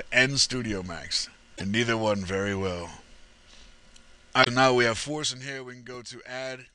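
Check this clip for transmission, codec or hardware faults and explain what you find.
Two kinds of fault are present: damaged data in the compressed stream at two points, and a single loud pop near the end.

Damaged data in a compressed stream occurs from 1.53 to 1.61 s and from 4.40 to 4.47 s. Corrupted frames there make the decoder misread or discard them and hunt for the next valid header, producing brief disruptions. On a spectrogram each appears as a short block where the pattern breaks abruptly. The waveform shows a matching discontinuity.

A loud pop sits from 5.94 to 5.97 s, about 5 dB above the surrounding signal, with the sound continuing beneath it. Its cause is likely a voltage step or pulse from a plug, switch, static or driver glitch. It shows as a vertical broadband line on the spectrogram and a sharp spike in the waveform.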